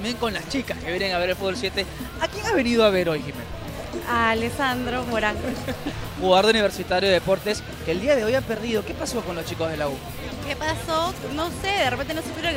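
GSM signalling bursts appear from 11.16 to 12.36 s. A nearby 2G phone is sending short groups of radio bursts, which happens when the handset signals to the network, and the audio circuitry rectifies that pulsed radio energy into audible interference. The result is a galloping dit-dit-dit of brief buzzes repeating at about 217 Hz, sitting roughly 20 dB below the main sound and stopping just before the end.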